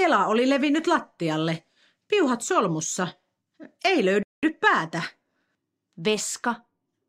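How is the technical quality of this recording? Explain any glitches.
The speech has one clear glitch, a playback stall. From 4.23 s to 4.43 s the speech cuts out mid-flow and the output goes completely silent for about 198 ms before the speech picks up again. The break is sudden. The cause is likely the player running out of buffered data, or its playback thread being briefly blocked, so nothing reached the output until it recovered.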